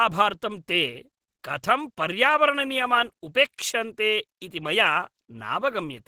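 Throughout, the speech sounds grainy, rough and hoarse. This is likely Opus compression in its hybrid mode, fitting a rate near 16 kbps.

At 1.43 s, just before "कथं पर्यावरणनियमान् उपेक्षन्ते", a 10 ms hiss softens the attack. This pre-echo comes from block-wide quantisation noise filling the quiet before the onset.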